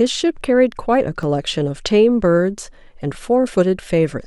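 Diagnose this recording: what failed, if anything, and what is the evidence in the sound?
Repeated buffer at 1.23 s and 3.14 s, a driver or buffer stage fault. New speech arrived late, so the last 5.8 ms block, consistent with a 256-sample buffer, replayed once, then twice, with hard joins heard as short clicking buzzes.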